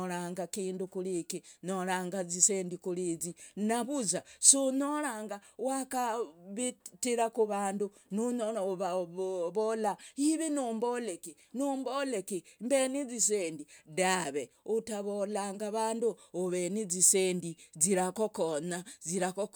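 Speech recording with no audible technical faults anywhere in the clip.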